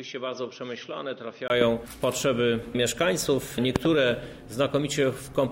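From 0.0 to 1.5 s the sound is dull and boxy, with nothing above 6.2 kHz, a level roughly 10 dB lower, and a faint new noise floor far beneath it. The input was likely switched to a poorer device. At 1.5 s a 20 ms gap precedes the return of full bandwidth. A spectrogram shows a hard ceiling at 6.2 kHz and then a brief blank column. The waveform is smaller before a short flat line.

A loud pop occurs at 1.61–1.64 s, a single spike about 15 dB above the sound. Two more pops sit at 3.76–3.87 s, about 20 dB above it, with the sound continuing underneath. Sudden voltage pulses are the likely cause. They appear as narrow waveform spikes and thin vertical broadband streaks on a spectrogram.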